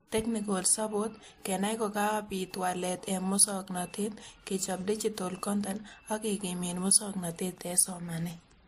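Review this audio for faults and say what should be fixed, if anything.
Throughout the speech, two kinds of codec artefact are heard together, and nothing is present above 15.2 kHz. This is likely transcoding between lossy codecs, which fits a low-rate MP3 near 46 kbit/s re-encoded as WMA near 96 kbit/s. The WMA stage spent bits copying the MP3 damage and added its own. The MP3 band limit carried through. To prevent this, encode once, directly from the original uncompressed source.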